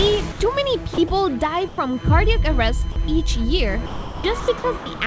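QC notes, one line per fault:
0.32–0.40 s, 1.68–1.78 s, 2.92–2.96 s: sound dropped by the voice detector. The sound gives way to steady, flat noise for 80 ms, 100 ms and 40 ms, then returns. The sender's detector likely took these stretches for background and stopped sending, so comfort noise filled in.
0.94–1.10 s and 3.86–5.00 s: sound chopped by the voice detector. The sound cuts in and out. 60 ms is replaced in the first stretch and 660 ms in the second. The detector likely switched sending on and off repeatedly, with comfort noise in each gap. Nothing above 8 kHz is present, consistent with the G.722 call path.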